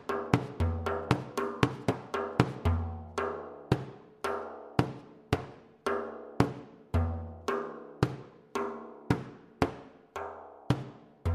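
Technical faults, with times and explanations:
No technical faults are audible at any point, and the signal stays steady and intact throughout.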